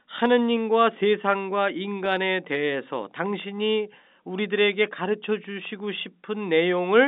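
No technical faults can be heard in this speech.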